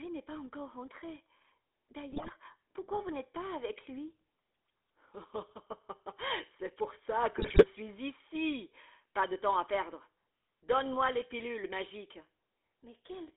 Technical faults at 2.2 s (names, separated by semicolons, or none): GSM full-rate codec; GSM bit errors